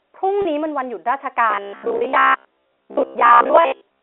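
Packet loss with pitch repetition hits this telephone-band speech clip at 0.42 to 0.45 s and again at 1.98 to 2.01 s. Each gap lasts about 30 ms, which fits a single lost packet. Because each gap is short, the receiver bridges it by repeating the last pitch period, so the sound briefly holds on a slightly buzzy, sustained tone rather than dropping out. Robotic sound from repeated short buffers runs from 1.51 s to the end at 4.02 s. Throughout that stretch a rigid, metallic buzz at 66.8 Hz is imposed on the speech. That rate points to a repeated buffer of about 15 ms, likely because new audio arrives too seldom and the software keeps replaying the latest fragment, skipping roughly two thirds or more of the real audio while loosely tracking its shape. The G.711 A-law coding is audible only as the narrow 300 to 3600 Hz line band.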